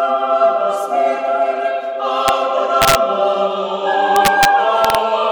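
This music clip has integer overflow: loud peaks driven about 1 to 3 dB past the limit wrap to the opposite sign, cracking harshly at 2.28 s, 2.82–2.95 s, 4.16–4.45 s and 4.85–4.95 s.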